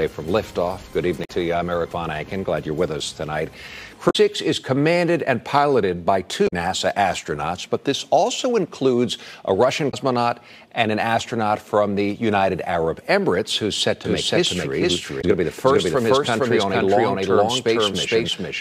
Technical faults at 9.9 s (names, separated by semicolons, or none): damaged data in a compressed stream